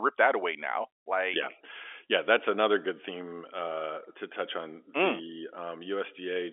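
Speech coming over an ordinary telephone line, and nothing in it is technically wrong.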